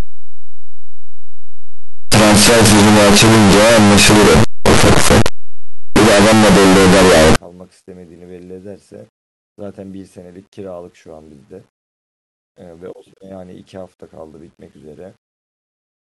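From the start to about 7.36 s the speech turns into a wall of very loud, harsh distortion, with soft sounds as loud as strong ones. That's likely signed and unsigned mixed up in the 8-bit samples, so every zero crossing jumps across the full range.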